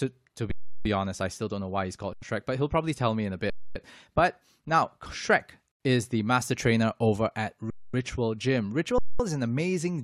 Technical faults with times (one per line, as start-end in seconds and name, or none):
0.51-0.85 underrun with held sample
2.13-2.22 underrun with held sample
3.50-3.75 underrun with held sample
5.72-5.80 underrun with held sample
7.70-7.94 underrun with held sample
8.98-9.20 underrun with held sample